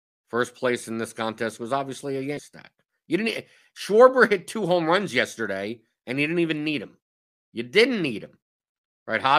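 Damaged data in the compressed stream shows up from 2.37 to 2.39 s as a brief glitch cutting into the speech. Corrupted bytes there made the decoder misread those frames, lose sync and hunt for the next valid frame header.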